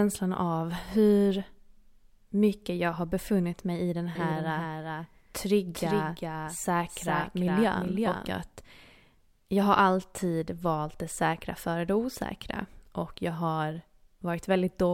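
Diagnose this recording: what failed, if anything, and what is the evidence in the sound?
A likely second, slower capture path or misaligned edit has mixed the speech in twice, producing a doubled audio track from 4.15 s to 8.27 s. A dry, full-band copy trails by roughly 400 ms, about 5 dB quieter, appearing and vanishing abruptly at those boundaries.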